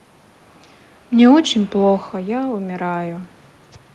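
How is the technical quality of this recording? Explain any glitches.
The recording has one audible glitch, a slow level change in the second half. It passes through a call codec, likely Opus at a modest rate, with the top end cut off at 12 kHz.

Automatic gain rising, from 2.11 to 3.34 s. Around 2 s the talker moves away, and the voice drops by about 12 dB at the microphone. The gain control notices and raises its gain by about 3 dB. The voice and the room noise swell together over that second.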